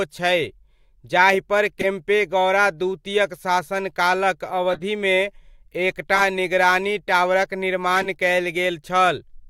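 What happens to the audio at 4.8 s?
A corrupt frame decoded from 4.70 to 4.80 s: damaged bits in a handful of compressed frames were played anyway, misplacing energy across wrong frequencies. It sounds like a brief glitch peaking near -15 dBFS, visible as a short vertical smear of misplaced spectral energy.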